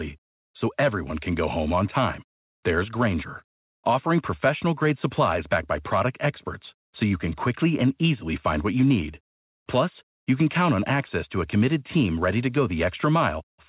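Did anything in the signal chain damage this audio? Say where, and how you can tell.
No, nothing in the chain has harmed this speech; it comes across as a normal call, with nothing above 4 kHz, which fits a G.711 mu-law link at 64 kbps doing its ordinary job.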